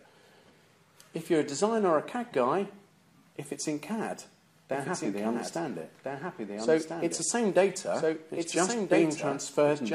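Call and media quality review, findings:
Doubled audio track from 4.72 s to end: full-band copy trails original by about 1.5 s, a few dB quieter, no decay or room colour, abrupt onset. Likely cause: second capture via slower path or misaligned edit. Spectrogram shows every pattern repeated 1.5 s later, slightly fainter. Waveform shows overlapping envelopes with a sudden density jump at 4.72 s.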